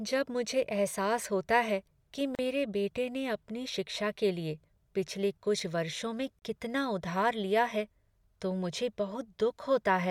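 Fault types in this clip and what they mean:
Gap at a join of encoded pieces: the speech was encoded in separate pieces and joined untrimmed, so encoder start delay and last-frame padding survive as short silences, about 37 ms at 2.35 s and 32 ms at 6.39 s, spaced 4.0 s apart, with smeared edges.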